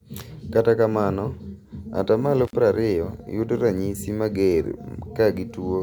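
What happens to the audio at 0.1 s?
Nothing goes wrong at 0.1 s; the audio at that moment is intact, with no dropout, click, distortion or other fault.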